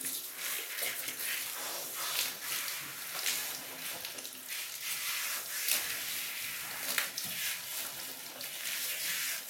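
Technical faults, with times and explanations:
No technical faults are audible.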